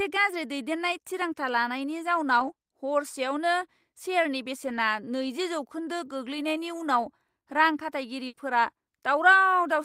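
At 2.39 to 2.49 s, 4.65 to 4.79 s and 5.85 s the speech turns briefly rough and noisy but never drops out. These are lost packets rebuilt from error correction. Each missing packet was replaced by a low-bitrate copy carried in the next one, covering about 60 ms, 80 ms and 20 ms. The lengths point to three, four and one lost packets. No sound is skipped, unlike true loss.

From 8.27 to 8.35 s a burst of packet loss removes real audio. The receiver stretched the last sound for 60 ms, so it comes out as a held, fading continuation, and then the speech resumes with about 60 ms missing. That missing stretch is what separates it from the rebuilt frames.

Right after it, from 8.35 to 8.39 s, comes a short concealed packet loss. About 20 ms was filled from the preceding sound and blended back in, giving only a brief smear or wobble where 20 ms of speech is absent.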